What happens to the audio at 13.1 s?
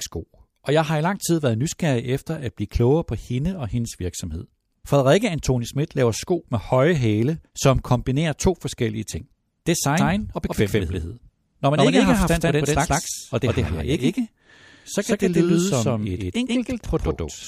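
At 13.1 s the sound is a doubled audio track, running from 9.98 s to the end: a full-band copy trails by roughly 150 ms at about equal level, likely a second, slower capture path. Unlike an echo, it has one repeat, no decay, and no room colour.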